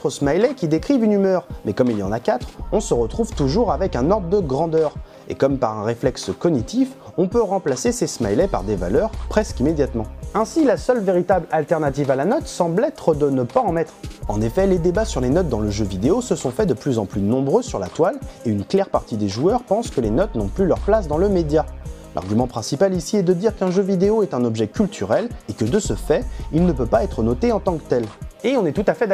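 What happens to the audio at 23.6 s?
Nothing goes wrong at 23.6 s; the audio plays through that moment intact, with no dropout, click, distortion or other fault.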